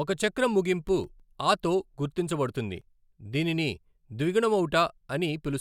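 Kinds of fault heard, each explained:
CD scratch ticks: A blemish on the disc ruins more data than error correction can rebuild. The player then patches or mutes the damaged samples on each turn of the disc. Here six short ticks fall between 0.73 and 1.51 s, just after "ఒక చక్రం" and before "తో గుర్తించబడుతుంది దీనిని". That is roughly seven or eight a second. Each is a tiny gap or click, the longest a couple of milliseconds. They sound like a regular ticking over the speech.
Overlap between stream segments: Two segments of the stream claim the same stretch of time. The player trims the overlap, though the sound there was not actually repeated. A few milliseconds of real audio are lost, and the waveform jumps at the join. Here it happens once, at 2.82 s, right after "తో గుర్తించబడుతుంది". It is heard as a single small click or skip. It comes at a join between 4-second segments.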